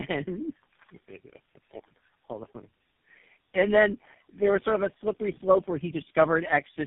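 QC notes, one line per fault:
Throughout, tandem speech coding: the call sounds like it went through three low-rate speech coders in a row, something like AMR-NB at 5.9 kbit/s twice and then GSM full rate, with plain telephone-grade links between them. Each coder re-encodes the last one's mangled output, so the errors stack up. That's why the speech is rough, muffled and warbly, and why nothing comes through above 3.6 kHz.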